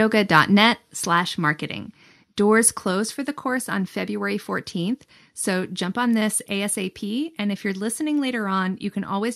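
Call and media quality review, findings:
Microphone volume stepped down at 1.02 s: speech and background drop together by about 3 dB in one step, then hold. Likely call software lowering device input gain. Unlike compressor action: no gradual recovery, no pumping.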